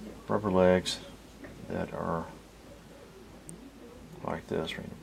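A single sharp snap sits on top of the sound at 3.49 s. It is an electrical switching spike. It is very brief, a tight click rather than a crackle or a burst of noise. It peaks at a fairly modest level, somewhere around -25 dBFS, so it pokes out without overloading anything. The likely cause is a nearby switch, motor or static discharge arcing once. The audio line picked that arc up and added it to the signal.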